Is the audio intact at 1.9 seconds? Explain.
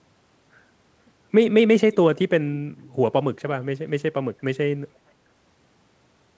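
No. From 1.92 to 1.97 s there is a brief echo leak: a faint, delayed copy of the speech, arriving about 467 ms late and well below the main signal. It is likely residual loudspeaker pickup that the far end's echo canceller failed to remove.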